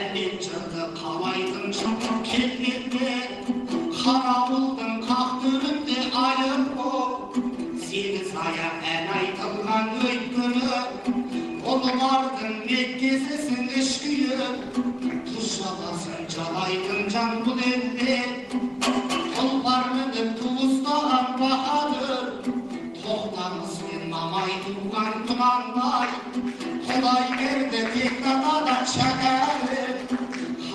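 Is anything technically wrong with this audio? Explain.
Yes, the audio has two kinds of playback fault.

A skip ahead occurs at 1.85 s. Roughly 0.7 s of audio was discarded while later audio already sat waiting, so playback leaps forward with no filler, and the sound on either side of the cut is butted almost directly together.

Jitter buffer speed-up follows from 2.15 to 3.05 s at 106% speed and from 3.50 to 7.48 s at 104%. The receiver, holding too much audio, repeatedly trimmed tiny pitch-period slices, about 50 ms and 150 ms in total, so the sound runs faster at unchanged pitch, hurried in the first stretch.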